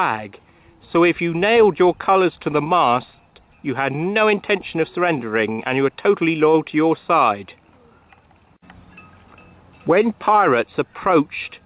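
At 5.52 s a packet arrives late and the jitter buffer runs dry, causing a short stall from a late packet: the receiver holds the last sound for about 63 ms, until 5.60 s, then resumes, losing nothing but shifting playback 63 ms later, heard as a brief smeared hold within audio already band-limited to 4 kHz.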